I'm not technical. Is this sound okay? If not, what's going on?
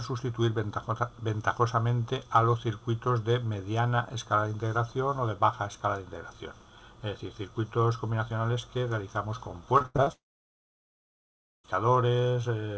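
No. From 9.78 to 10.08 s there is repeated packet loss (robotic sound): the connection keeps losing small pieces, about five short holes, each patched by stretching the previous sound. Unlike one long gap, the sound stays choppy while still moving forward.

Then, from 10.12 to 11.66 s, the sound gives way to a brief fading buzz and then roughly one and a half seconds of near silence, most likely a long network dropout. Unlike the choppy stretch before it, nothing comes through at all, and the audio resumes with that part missing.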